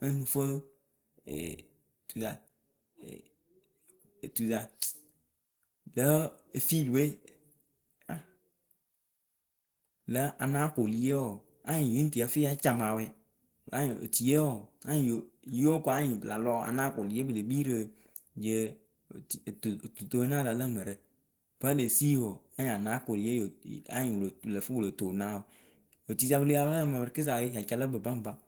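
Throughout, the speech sounds hoarse and grainy, likely from Opus compression in hybrid mode near 16 kbps; a spectrogram shows smeared, noise-filled bands up to 20.2 kHz.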